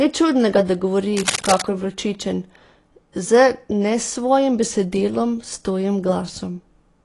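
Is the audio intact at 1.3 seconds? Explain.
No. From 1.17 to 1.63 s a burst of scratching and rustling lies over the speech, only a little quieter than the speech itself. It sounds like cable scratch noise, most likely a worn cable or connector being moved so that its contact resistance jumps about rapidly. Unlike clicks or dropouts, which are brief isolated ticks or gaps, this is a dense, uneven crackle lasting nearly half a second, and the speech continues underneath it.

The same moment also carries the dullness of AAC compression, which runs through the whole clip. Nothing is present above 11.4 kHz, and the sound has the smeared, warbling texture of a coder that discards spectral detail against a hearing model. That is consistent with a low bitrate, around 32 kbps, being the likely cause. It differs from a plain low-pass filter by this fizzy, unstable quality in the upper range.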